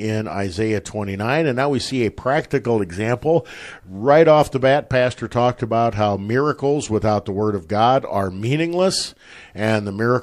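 At 6.81 s, a corrupt frame was decoded: flipped bits in what sounds like a couple of compressed frames were played anyway, scattering energy to wrong frequencies. It comes through as a brief blip of noise, peaking around -30 dBFS, just before "without the".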